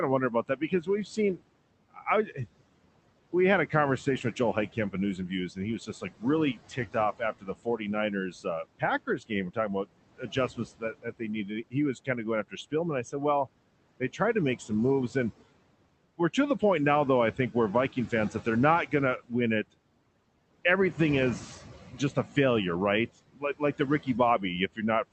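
Speech over room noise sitting about 15 dB below the talker, carried through a call path whose top end stops around 8 kHz, consistent with a 24 kbps Opus stream. Throughout, there are noise suppressor artifacts: the suppressor pulls the background down by about 21 dB between phrases and lets it back up under the speech, so the leftover noise pumps. It also produces speech cut by the noise suppressor, treating quieter stretches of talk as noise and ducking them along with the background. This happens from 0.3 to 2.38 s, just after "of wondering" (down by about 21 dB, roughly 0.7 s in total affected), then heavily across 3.33 to 13.47 s (about 22 dB, around 3 s of speech swallowed), lightly from 14.0 to 15.16 s (about 10 dB), from 17.37 to 19.75 s after "now though I" (about 19 dB), and from 23.28 s to the end (about 21 dB). Soft consonants and word endings sound faint or missing in those spans.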